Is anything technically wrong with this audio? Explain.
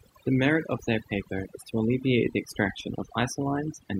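Yes. Throughout, the speech sits over a near-silent, twinkling background: overdone noise removal, where an overly aggressive noise reducer cut whole frequency bands along with quiet speech detail.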